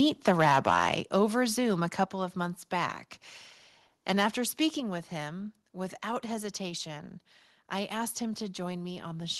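From 0.27 to 0.94 s, the microphone input was likely set too high, driving peaks about 7 dB past the converter's limit. Flattened tops on a small share of samples give the loudest syllables a harsh crackle. At 1.02 s, the input was likely stepped down by software reacting to that distortion, and the level drops about 5 dB at once. A similar microphone volume step-down follows at 2.04 s, about 4 dB, just before "of months back", and another at 4.8 s, also about 4 dB, just before "with him without hesitation". Each time, voice and background fall together, audibly abruptly.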